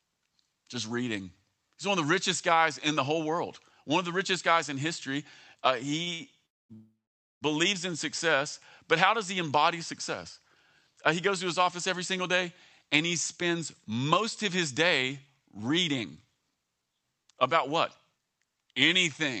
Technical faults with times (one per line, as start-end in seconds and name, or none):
6.03-6.22 short stall from a late packet
6.46-7.43 call audio freeze
12.83-18.74 jitter buffer speed-up